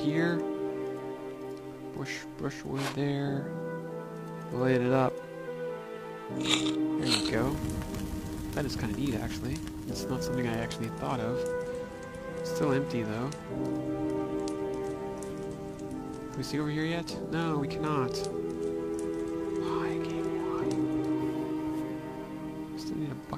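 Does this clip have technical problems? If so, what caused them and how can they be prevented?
Yes, there are two short blips of damaged data in a compressed stream, at 5.44 to 5.48 s and 20.58 to 20.63 s. Corrupted bytes knock the decoder out of sync, so it mangles those frames until it finds a valid header again. Checksummed transfers and intact source files would prevent it.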